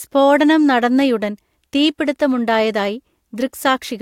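No technical faults can be heard anywhere in this speech recording; the signal holds steady throughout with nothing that points to a problem in capture, processing or playback.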